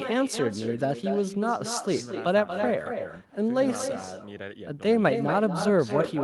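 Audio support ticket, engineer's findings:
Echo with no canceller, full clip: speech shadowed by quieter, thinner copy about 8 dB down, around a fifth of a second late. Far-end loudspeaker into open mic, no cancellation. Waveform: each burst trailed by smaller repeat; spectrogram: offset ghost of every onset.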